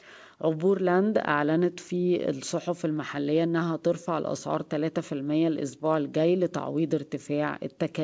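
Nothing here stands out as a fault: the speech comes through a normal call path, with the top end stopping at about 8 kHz, which fits a wideband codec such as G.722 doing its ordinary job.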